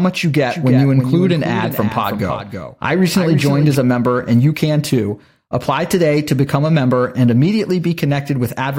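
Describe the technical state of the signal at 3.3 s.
At 3.3 s the speech has a doubled audio track, from 0.51 to 3.75 s. A second copy, about 10 dB quieter, trails roughly 300 ms behind, likely from a slower capture path.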